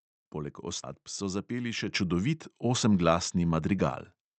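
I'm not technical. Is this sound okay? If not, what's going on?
No, there are three problems in this speech clip.

At 0.83 to 0.85 s there's a skip ahead. Roughly seven tenths of a second of speech got thrown away while the call was catching up, and the two sides are stitched together with basically no gap, so it jumps forward.

At 1.88 s the microphone volume stepped up. The call software decided the mic was too quiet and turned it up in one go, so the voice and the background noise both get noticeably louder at that moment.

From 2.86 to 4.30 s there's a jitter buffer speed-up. Audio had piled up waiting to play, so the receiver kept snipping out tiny slices, about a seventh of a second in total. The speech runs about 9% faster and sounds slightly rushed, but the pitch stays the same.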